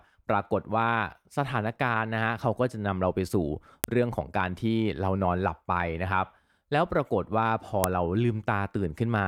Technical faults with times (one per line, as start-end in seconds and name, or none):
3.84 file header played as audio
7.84 file header played as audio